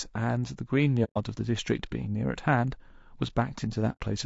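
Throughout the speech, a low-bitrate encoding is most likely the cause of a rough, grainy texture: the pattern fits low-delay AAC compression (AAC-ELD) at around 32 kbps. Its short analysis frames cannot separate the voice's harmonics cleanly, and at this bitrate too few bits are left to fill them properly. The result is plainly audible noise smeared between the harmonics and a thin, somewhat artificial top end.

At 1.04 s, AAC frame loss with muting opens a hole lasting until 1.17 s. The decoder received nothing for about 120 ms, which fits four lost frames of about 30 ms each, and it replaced them with silence. Because successive frames overlap, the sound fades out and back in rather than cutting off, leaving a soft-edged gap. A second loss of the same kind falls between 3.92 and 4.01 s. About 90 ms is missing, scattered across roughly 120 ms, with the longest stretch near a tenth of a second, so the sound dips out unevenly before recovering.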